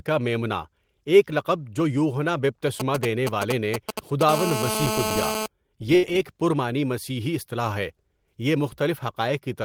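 From 2.80 to 4.23 s, GSM signalling bursts break into the speech. A 2G handset close by is exchanging short control messages with the network. The audio circuit picks up its radio pulses and rectifies them into sound. The result is a galloping dit-dit-dit of short buzzes. The pulses repeat at 217 Hz. They sit roughly 5 dB below the speech.

At 4.29 s the pattern changes into a steady GSM phone buzz, which lasts until 5.46 s. The handset is now in a call and transmitting in regular bursts. It sends a burst 217 times a second. The rectified pulses form a hard, raspy tone at 217 Hz, full of harmonics. The buzz does not follow the speech at all. It runs about 3 dB below the speech level, so it nearly matches the talker.

From 5.95 to 6.05 s, a burst of packet loss hits. A run of audio failed to arrive in time. The receiver covered about 75 ms by extending the last sound and fading it down. 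What was happening at that moment turns into a brief held buzz or a fading hiss. Playback then jumps ahead. About 80 ms of speech is simply gone.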